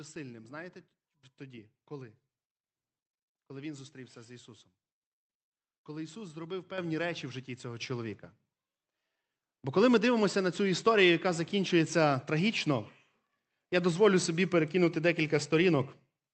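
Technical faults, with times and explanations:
6.78 s and 7.80 s: microphone volume stepped up. The call software judged the input too quiet and raised the device gain in two abrupt jumps, about 8 dB then about 5 dB, so speech and background noise grow louder together within the call path's 8 kHz band.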